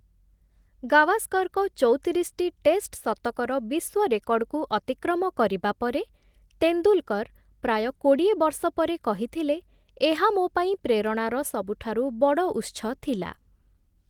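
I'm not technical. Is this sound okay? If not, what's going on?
Yes, this recording sounds fine, with nothing wrong to worry about.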